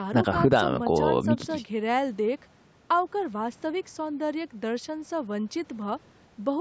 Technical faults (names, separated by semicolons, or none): none